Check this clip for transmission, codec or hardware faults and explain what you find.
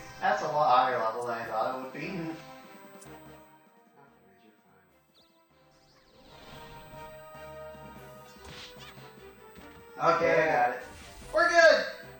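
One hardware fault is present. USB whine runs throughout the clip. It is a fixed tone at 8 kHz, strongest at its 16 kHz harmonic, roughly 30 dB below the sound. Current drawn in 125-microsecond USB microframes leaks into the audio path.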